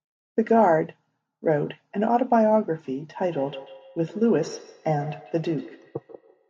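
From 3.17 s to the end, a second device in the room replays the call into this microphone, which its own echo canceller cannot remove. The result is a feedback echo between two devices: each word returns roughly every 150 ms, thinner and ringing, peaking about 19 dB below the speech.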